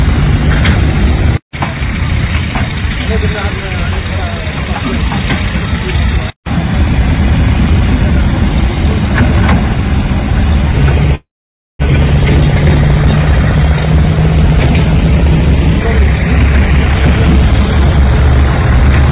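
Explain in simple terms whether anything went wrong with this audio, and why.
There's a call audio freeze from 11.15 to 11.82 s. The sound stalls, a brief fading fill gives way to about half a second of silence, then it picks up exactly where it stopped, so nothing's lost, just delayed. Likely cause: packets got held up and the jitter buffer ran dry.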